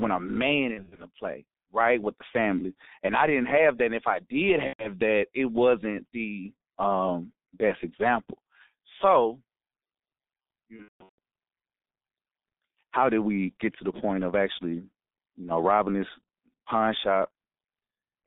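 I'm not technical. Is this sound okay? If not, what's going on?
No, not quite. The whole recording has gone through the G.723.1 codec, an old internet-phone voice compressor. It keeps only a narrow phone-like band and rebuilds the voice roughly, so everything sounds muffled and a bit hoarse, with smeared consonants.

There are also three dropouts: VoIP packet loss concealed by the speech codec, at 0.74–1.08 s, 4.67–4.93 s, and the worst at 10.76–11.18 s. Bits went missing, and the decoder filled the gaps with a fading guess, a buzzy tone or a coloured noise, so the voice stays shaky just afterwards.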